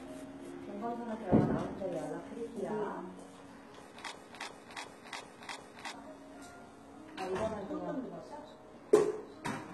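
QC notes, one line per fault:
Throughout: HE-AAC compression. The treble sounds rebuilt rather than captured, gritty and metallic above the crossover, which fits a likely very low bitrate near 16 kbps.
4.12 to 5.94 s: broken-record loop. A 0.36 s fragment repeats back to back five times, likely from a stalled player or stream resending its last buffer. The audio due in that span is lost.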